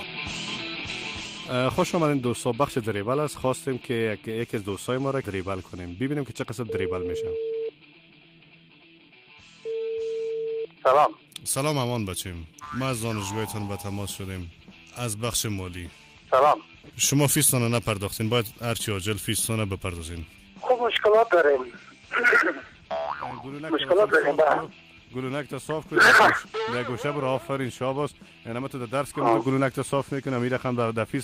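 No fault turns up anywhere in the recording.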